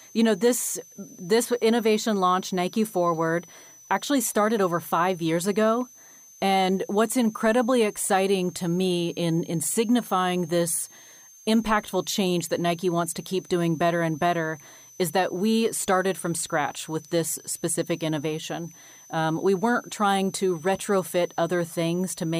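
A thin, high whistle sits under the speech for the whole clip, wandering in pitch between about 6.0 and 6.4 kHz and staying roughly 25 dB below the speech. This is a switching supply whistle: a switch-mode power supply feeding the recording chain has dropped into a burst mode slow enough to fall within hearing, or is beating against a second supply. As its load shifts, the switching rate moves, so the tone drifts rather than holding steady.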